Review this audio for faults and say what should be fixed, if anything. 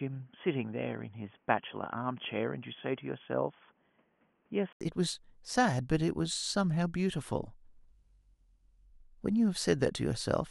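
From 0.0 to 4.81 s the speech stops at 3.4 kHz, sits a few dB quieter over a faint new noise floor, then clears after an 80 ms gap. This is likely an input switched to a poorer device. The gap and the simultaneous level and noise change distinguish it from a plain low-pass filter. To prevent it, lock the recording input to one microphone and keep headsets from taking over in their call profile mid-session.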